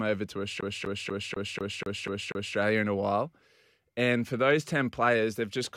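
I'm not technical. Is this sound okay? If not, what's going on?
No. From 0.61 s to 2.57 s the speech is caught in a CD stuck on one turn. Right after "over to", the same scrap of about 0.24 s plays eight times in a row. Each repeat is separated by a tiny gap of silence. That gives a fast, even stutter. A scratch on the disc keeps throwing the laser back to the same spot on each turn. Normal playback returns at "in a while".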